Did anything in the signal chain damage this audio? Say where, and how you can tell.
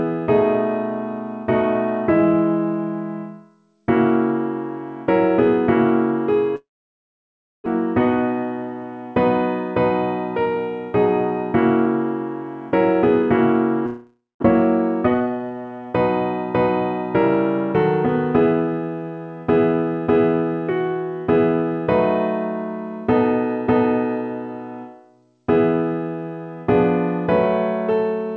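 Yes, a long network dropout at 6.56 to 7.68 s and 13.86 to 14.44 s: sound smears into a fading buzz, then silence, and resumes with audio missing, likely lost packets concealed by the receiver.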